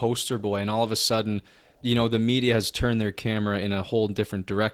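Opus voice compression runs throughout the speech, audibly hoarse and slightly robotic from coarsely coded excitation, which fits a low bitrate around 16 kbps.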